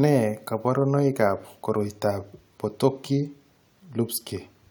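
Speech recording with no technical faults to be heard at any point in the signal.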